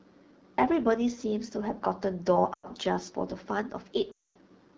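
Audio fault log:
Throughout: AMR wideband (HD Voice) codec. The speech sounds plainly rough and raspy, with a buzzy, grainy texture in place of clean detail, and the top of the band sounds hissy rather than crisp. The codec rebuilds the voice from a pulse-driven model of the vocal tract up to 6.4 kHz and fills 6.4 to 7 kHz with shaped noise. The degree of damage points to one of the two lowest AMR-WB rates, about 8.85 kbit/s.
2.53–2.66 s and 4.11–4.37 s: lost AMR speech frames. At 2.53 s the sound drops to near silence for about 100 ms, which fits five missing 20 ms frames. At 4.11 s a longer run of about 240 ms, likely twelve frames, drops to near silence within two frames, and the voice returns weak or rough for a moment. Frames that failed their checksum after radio errors are concealed by reusing the last good pitch and vocal tract settings at falling gain.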